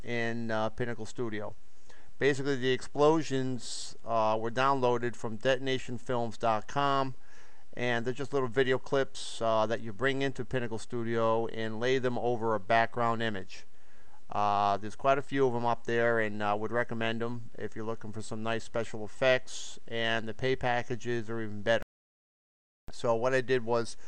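At 21.83 s the sound stops dead and stays completely silent until 22.88 s, an audio dropout to silence lasting about 1.06 s. There is no room tone or noise floor in the gap, and the sound resumes mid-flow with whatever happened in that second gone. The likely cause is a momentary loss of the input signal while recording continued. On a waveform the trace collapses to a flat line; a spectrogram shows a sharp-edged, fully blank vertical band.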